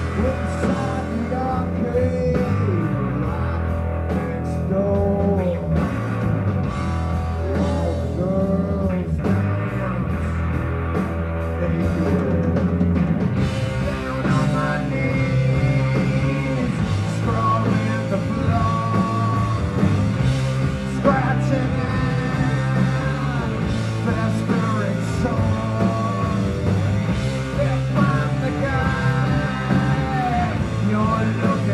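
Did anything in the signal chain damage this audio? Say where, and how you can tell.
No, nothing along the chain has left a mark I can hear, so there's no stage to point at here.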